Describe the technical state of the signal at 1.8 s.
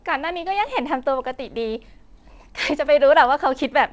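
At 1.8 s the speech is intact, with no dropout, glitch or distortion, only the steady band limit of the G.722 call path, which leaves nothing above 8 kHz.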